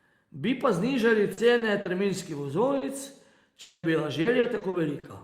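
Packets went missing again and again from 1.33 s to 5.05 s, just after "pa znižali": nine short gaps, the longest 40 ms, each patched by stretching the previous sound. About a tenth of the stretch is concealed, so the speech turns choppy and robotic.

From 3.61 s to 3.86 s, a long network dropout likely cut the stream for about 220 ms. The last sound is carried on as a fading buzz or hiss, ending in brief silence before the speech resumes with that portion gone.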